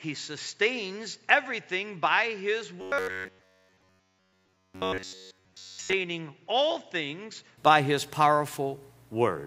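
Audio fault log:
0.00–7.58 s, input switched to a poorer device: From the start the sound is dull and boxy. It sits roughly 10 dB quieter than what follows. A faint new noise floor lies well below the signal. At 7.58 s the sound clears and opens up at once, with no gap at the change. This is likely a capture device with a narrower band and its own gain and noise.
2.81–5.93 s, robotic sound from repeated short buffers: Here the speech becomes a rigid, metallic buzz at about 94 Hz. It still loosely follows the speech rhythm. All of this span is repeated material rather than new audio. Each short slice is played over and over while the real audio is skipped. The buzz frequency fits a repeated buffer of about 10.7 ms. The likely cause is audio arriving too seldom and gaps being filled from the last buffer.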